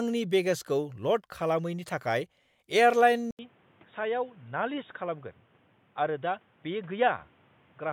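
At 3.31 s, after an 80 ms gap, the speech turns dull, slightly quieter, capped at 3.8 kHz, with new faint background noise: likely input switched to a poorer device, not mere filtering.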